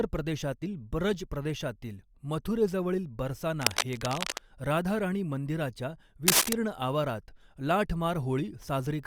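Cable scratch noise occurs from 3.61 to 4.44 s, after "प्रदेशातील ब्रज प्रदेशातील मथुरेजवळील", and from 6.27 to 6.53 s, before "आवारात लाठ". Dense, ragged scratching sits over the speech, about as loud at first and somewhat louder the second time. It is likely from a worn cable or connector shifting its contact resistance.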